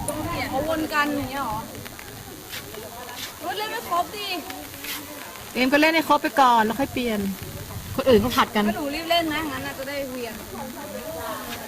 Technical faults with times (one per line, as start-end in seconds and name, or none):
0.00-11.68 DECT cordless phone buzz